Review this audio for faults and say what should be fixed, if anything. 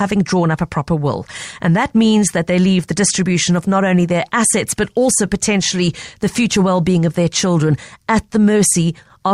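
No faults found; nothing needs fixing.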